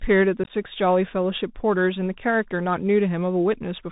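The clip is speech carried over a Bluetooth CVSD headset codec. Nothing above 4 kHz survives. Loud high sounds outrun the adapting step size and distort. S sounds turn scratchy, and a granular hiss sits under everything, which fits a 64 kbps CVSD link. From 0.44 to 0.51 s there is unconcealed Bluetooth headset packet loss. A handful of short voice packets went missing, about 38 ms in all across 60 ms. The longest hole is 15 ms. The gaps have abrupt edges, and the speech comes back briefly quieter.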